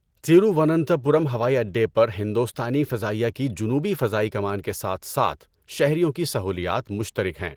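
Nothing's amiss in this speech recording, which comes through Opus voice compression at 20 kbps in its full-band hybrid mode, and there's no technical fault to point to anywhere in it.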